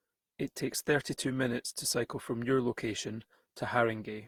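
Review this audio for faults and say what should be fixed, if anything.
Generation loss runs through the whole speech clip. The sound is swirly and hollow, with a smeared quality. Consonant attacks are blurred rather than crisp. The damage is heavier than a single pass at this quality would leave. The likely cause is repeated lossy re-encoding, about ten passes, in a way that fits Opus at around 64 kbit/s. Each pass quantises on a shifted frame grid. The noise and spectral holes stack up. To prevent it, keep a lossless master and encode to the lossy format only once, at the final step.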